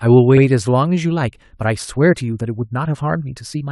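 From 1.02 s to the end, a time-stretched section plays at 1.5 times speed with unchanged pitch, likely from software dropping short slices to shorten it. It sounds rushed. On a spectrogram, harmonic spacing stays fixed while events crowd closer, with small splice discontinuities.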